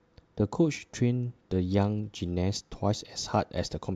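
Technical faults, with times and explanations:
Throughout, crude rate conversion: the speech carries a faint gritty fizz that rides on louder and brighter sounds, some 35 dB below the signal. The sound points to an upsampling from 32 kHz to 48 kHz, a 3:2 ratio, done by linear interpolation with no filter. The error that approach leaves produces inharmonic tones. On a spectrogram, faint mirrored images of the speech energy appear above 16 kHz, unrelated to its harmonics.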